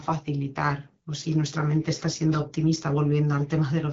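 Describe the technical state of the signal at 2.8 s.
At 2.8 s the speech is intact, carried cleanly through the AMR wideband (HD Voice) coding at 12.65 kbit/s with no fault at that moment.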